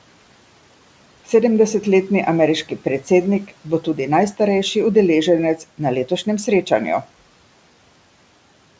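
Between 3.48 and 3.98 s, speech cut by the noise suppressor: it mistook low-level speech for noise, pulling around a tenth of a second down by up to about 10 dB, so soft sounds come out swallowed and faint.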